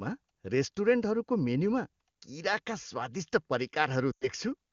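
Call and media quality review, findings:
Brief drop to near silence within two frames, 4.11 to 4.28 s, voice returning weak or rough. Lost AMR speech frames: about 100 ms failed checksum, fitting five 20 ms frames; wideband decoder repeats last pitch and vocal tract settings, gain decaying quickly.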